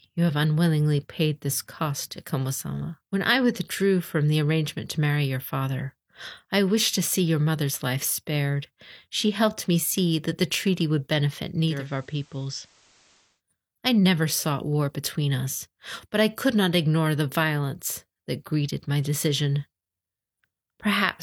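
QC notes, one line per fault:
11.59–13.42 s, digital radio blending to analogue: the receiver loses the digital stream and cross-fades over about 285 ms to the FM broadcast of the same station, then returns. During the FM stretch the speech drops by about 3 dB. A steady hiss also rises to around 30 dB below the signal, which is the FM noise floor showing through once the digital path is gone.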